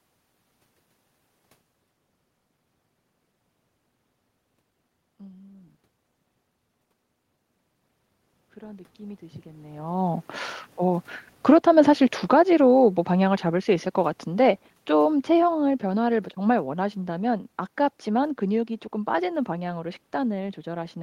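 Speech recorded with audible automatic gain rising from 8.54 to 11.13 s. The level climbs by about 10 dB over roughly two and a half seconds as the gain control, judging the input too quiet, keeps turning itself up. What separates this from a talker simply leaning closer is that the room noise swells along with the voice. When only the talker moves, as heard around 1.5 s and again near 9.5 s, the voice changes but the background stays put. Just after, from 11.34 to 17.43 s, comes automatic gain falling. The control decides the input is now too loud and backs off gradually, pulling the level down by about 13 dB over some six seconds. Again the background sinks in step with the voice, which rules out a talker stepping away. The slow, steady slope across several seconds also distinguishes this from a sudden level jump or a fast limiter clamp.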